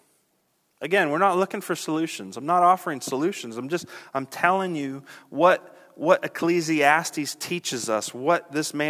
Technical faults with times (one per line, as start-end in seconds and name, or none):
none